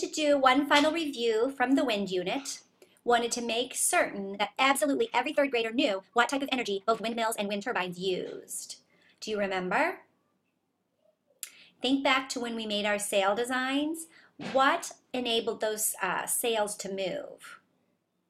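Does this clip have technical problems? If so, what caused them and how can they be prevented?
Yes, there's a time-stretched section from 4.33 to 7.99 s, where the pace jumps to about 1.92 times normal but the pitch holds, so it sounds rushed. That's likely software squeezing audio to fit a slot by dropping short slices. To prevent it, edit the material to length instead of stretching it.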